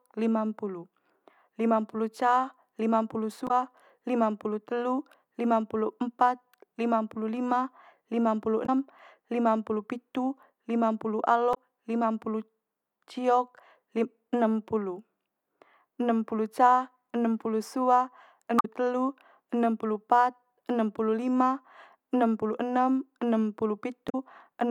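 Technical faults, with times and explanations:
3.45–3.51 s, 8.63–8.69 s, 11.51–11.57 s, 18.57–18.65 s, 24.06–24.15 s: damaged data in a compressed stream. Brief glitches follow "lima limampulu" and "enempulu sua". Corrupt frames break decoder sync while it hunts for the next header.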